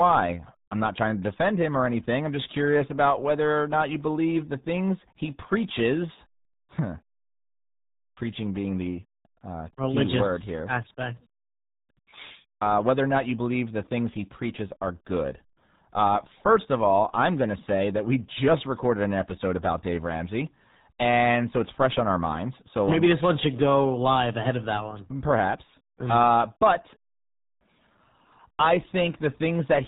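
RealAudio 14.4 codec damage runs throughout the speech, from start to end. The heavy coding leaves nothing above 3.8 kHz and turns the speech muffled and gargly, which fits a very low 8 kbit/s speech codec built for dial-up modems.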